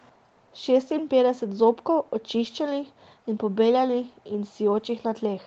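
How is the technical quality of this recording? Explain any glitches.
No glitches are audible in the speech; the audio carries the ordinary character of a call path, with nothing above about 8 kHz, which fits a wideband Opus setting.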